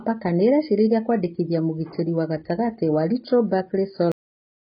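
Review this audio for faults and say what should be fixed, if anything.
The speech has nothing above 5 kHz for its whole length. It sounds dull and muffled. The damage is heavy. Consonants and sibilants lose their edge and sound smeared. The likely cause is AAC compression, probably AAC-LC at a bitrate around 16 kbps. At such a low rate the encoder cuts the top of the spectrum to save bits. It also quantises the remaining bands coarsely against its hearing model. Fix it by encoding at a much higher bitrate from the original source.

There is a cut-off end at 4.12 s. The audio stops in the middle of a sound. It drops straight to digital silence with no decay. That silence lasts about half a second, to the end. The last buffers were never written, so the remaining sound was lost. Nothing fades, because the signal simply ends. Prevent it by flushing and writing all buffered audio before closing the file or stream.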